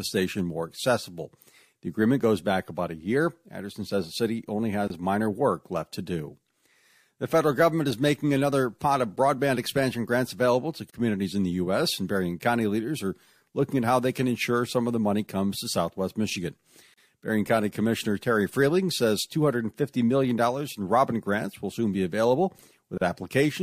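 Gaps at a join of encoded pieces interrupt this speech clip at 4.88 s (about 27 ms, after "says the city only"), 10.90 s (after "expansion grants available to"), 16.94 s and 22.98 s (after "will soon be available"), about 37 ms each, recurring every 6 s. Each separately encoded piece kept its start-up delay and padded final frame, leaving brief, smeared silences before the sound resumes where it stopped.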